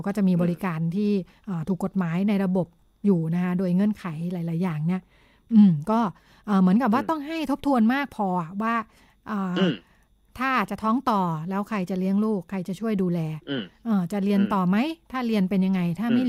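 From the start to about 2.57 s there's a block size mismatch (truncated): the tail of each block gets dropped between stages, giving a steady buzz at 46.9 Hz, which fits 1024-sample blocks. Here the speech still runs at its normal speed and pitch.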